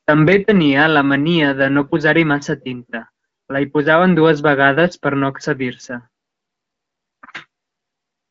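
No technical faults are audible.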